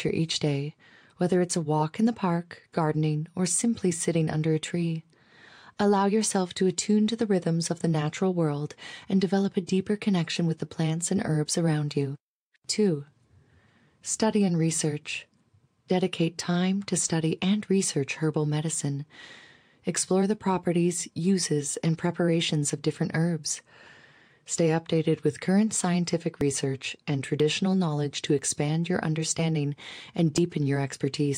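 Speech with regular ticks every 0.99 s from 25.42 to 30.38 s, after "updated with": periodic USB or driver dropouts, each skipping roughly 10 ms of audio.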